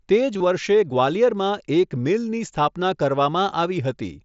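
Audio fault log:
0.34–0.40 s, concealed Bluetooth headset packet loss: 30 ms went missing within 60 ms, longest run 22.5 ms. The receiver patched each hole by repeating a recent matching stretch of waveform, so instead of silent gaps there is a short buzzy held tone, then a slight warble as real audio returns.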